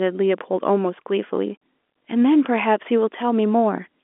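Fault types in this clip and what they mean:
DC step: a sudden jump in the waveform's zero line at 0.38 s gives a low thump that then decays away; unlike a dropout, the speech carries on intact.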